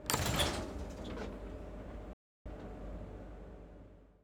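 A playback stall at 2.13 s is the one fault here. The player most likely ran short of incoming data, or its output thread was held up, so nothing reached the output for about 0.32 s. To a listener, the sound cuts off abruptly in mid-flow and leaves a clear hole of silence until 2.46 s, when playback picks up again once the player has recovered.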